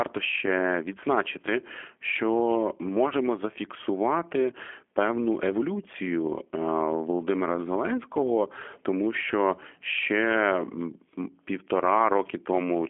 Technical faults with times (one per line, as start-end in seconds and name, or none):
0.00-12.90 G.729 codec
3.09-3.14 VoIP packet loss concealed by the speech codec